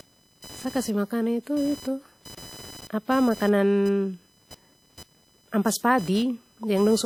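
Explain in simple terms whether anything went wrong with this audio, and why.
Two things went wrong here, and both run the whole seven seconds of the clip.

First, there's computer activity noise. Underneath the speech you can hear a buzzy, chirpy whine that pulses around a thousand times a second and sits below the voice. It comes from the computer's processor, graphics card or mouse pulling current, which shifts the ground the audio circuit shares. So the noise follows what the machine is doing, not what's being said.

Second, the speech has plainly audible codec damage: a ringing, washy quality, with hiss that seems to breathe along with the voice instead of staying steady. The likely cause is WMA compression. That codec chops sound into fairly long blocks and rounds each one off, so its errors smear over tens of milliseconds, and quieter detail gets dropped entirely when the file is squeezed small.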